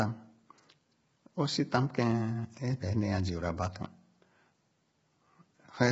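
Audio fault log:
throughout, low-delay AAC compression: rough, grainy speech, noise between harmonics, nothing above 7.7 kHz; grit rather than swirl, likely from short frames near 16 kbps.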